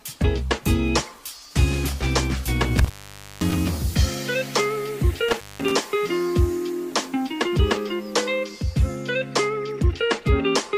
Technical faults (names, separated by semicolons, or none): intermittent contact